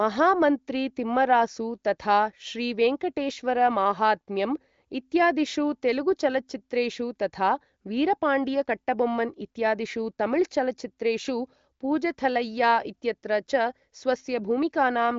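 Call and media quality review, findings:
No findings in this call and media quality review; there are no faults to report.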